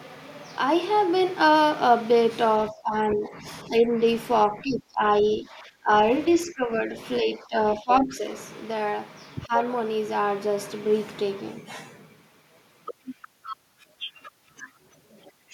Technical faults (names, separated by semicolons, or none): speech suppressed in double talk